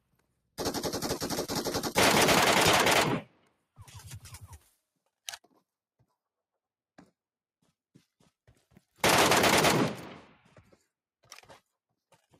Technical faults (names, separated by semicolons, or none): noise suppressor applied to music or sounds; sound cut by the noise suppressor